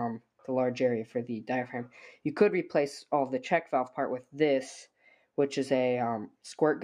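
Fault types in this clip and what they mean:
Noise suppressor applied to music or sounds: A speech-oriented noise suppressor is active across the whole clip and treats sustained, non-speech content as noise to be reduced. The gain it applies keeps shifting, so the level rises and falls by a few decibels without any matching change in the source. This heard as a pumping or fluttering in the sound. The reduction lands hardest on steady and decaying parts, leaving the material thinner than it should be.
Sound cut by the noise suppressor: Between 4.86 and 5.25 s the suppressor classifies part of the sound as noise and attenuates it well beyond its clip-wide behaviour. At the deepest point the drop is about 10 dB, and the affected portion totals roughly 300 ms within that window. The sound audibly sinks or has its decay cut short there, then returns to its surrounding level once the suppressor releases.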